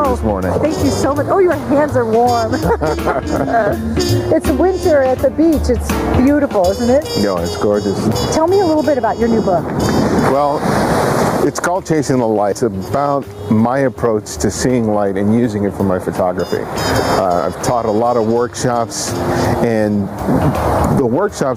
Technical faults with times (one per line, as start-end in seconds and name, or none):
0.00-21.57 gain pumping